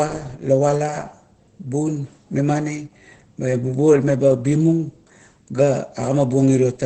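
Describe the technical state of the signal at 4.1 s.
At 4.1 s you're hearing Opus voice compression, and it runs through the whole clip. The SILK speech coder is working at a low rate, which sounds like about 12 kbps, so nothing survives above 8.4 kHz and the coarse excitation leaves the speech muffled, hoarse and faintly robotic.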